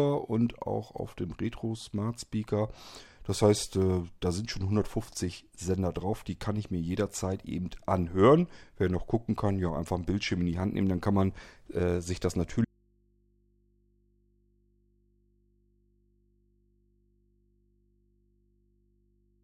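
At 12.65 s the speech cuts off abruptly and never returns; to the end only a low mains hum remains, roughly 40 dB below the signal. This audio dropout to a faint residue likely reflects a lost feed with the input left open.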